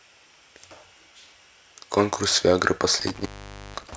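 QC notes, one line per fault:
3.00 to 3.96 s, intermittent contact: a loose cable or plug connection in the signal path breaks and remakes contact near the end of the speech, with the line going fully open for about 486 ms within this stretch. While the circuit is open the speech drops out, leaving only faint hiss and possibly mains buzz. The abrupt make-and-break of the contact produces crackle at the edges of the dropout.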